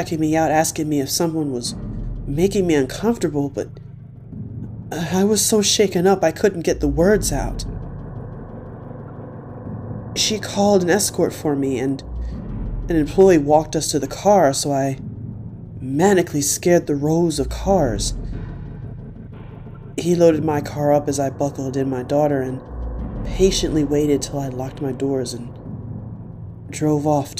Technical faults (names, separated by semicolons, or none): none